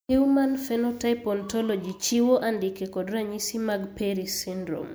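Nothing in this speech recording stood out as a technical fault on listening.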